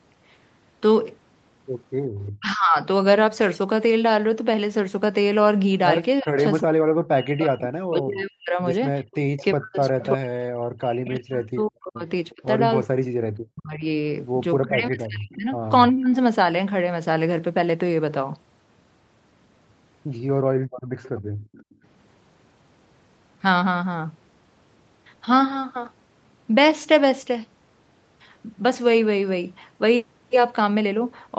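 At 2.19 to 2.32 s, an echo leak, likely a loudspeaker echo the canceller failed to remove, returns a brief copy of the speech 356 ms late, about 25 dB down. From 2.39 to 2.78 s, speech suppressed in double talk, likely the canceller attenuating its own talker along with the loudspeaker echo, dips the speech by about 25 dB. From 6.21 to 16.17 s, the same double-talk suppression, likely from that cause again, dips the speech, dropping it by up to about 40 dB for roughly 7 s in total. Within that stretch, from 6.37 to 10.05 s, a louder echo leak, likely uncancelled loudspeaker pickup, trails the speech by 356 ms at about 15 dB below it. At 12.3 s, a scrap of echo, likely leaked the same way, sits about 30 dB down. From 20.44 to 21.85 s, the background is gated by the echo canceller, which clamps the microphone while the loudspeaker plays. The room sound drops by as much as 40 dB for about a second before returning. 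From 20.76 to 21.74 s, another echo leak, likely the same uncancelled loudspeaker path, repeats the speech 356 ms late, about 25 dB down.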